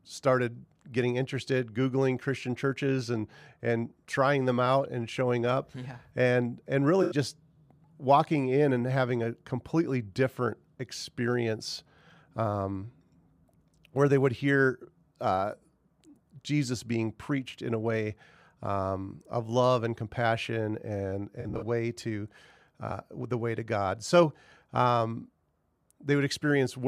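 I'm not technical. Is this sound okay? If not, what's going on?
No. The audio has two short glitches from AAC frame loss with concealment. Pieces of the stream went missing, and the player patched the gaps by guessing. At 7.02 s, right after "up yeah and and", about 85 ms sounds smeared and noisy. At 21.40 s, after "love and compassion and", several tiny dropouts over about a fifth of a second sound smeared before "way to uh the".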